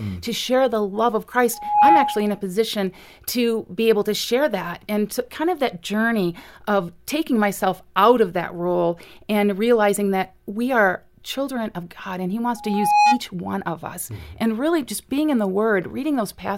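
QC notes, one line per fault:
1.53–2.41 s and 12.56–13.21 s, loudspeaker feedback squeal: after "share the love of" and before "one of us", an 832 Hz tone swells quickly, peaking roughly 10 dB above the speech. The microphone-to-loudspeaker loop exceeds unity gain there.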